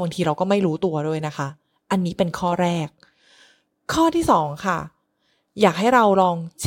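Nothing in this recording stands out as a technical fault, so there's nothing here to flag or time-stamp.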